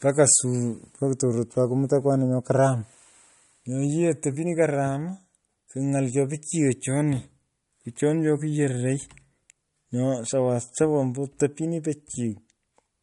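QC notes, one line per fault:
Throughout: MP3 compression, watery, swirly speech with smeared consonants and nothing above 11.1 kHz, likely from a low bitrate near 49 kbps starving the encoder.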